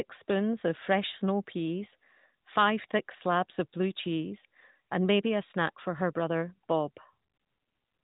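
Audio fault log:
No faults turn up anywhere in this speech, which carries the narrow, phone-call sound of the AMR narrowband mobile codec running at 12.2 kbps.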